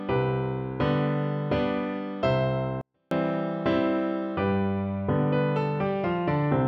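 At 2.81 s the audio falls almost silent until 3.11 s, a 24-bit alignment error: 24-bit samples sitting in the low bytes of 32-bit words were read as full 32-bit values, cutting the level by about 48 dB. The waveform collapses to a near-flat line, and the spectrogram fades uniformly without changing shape.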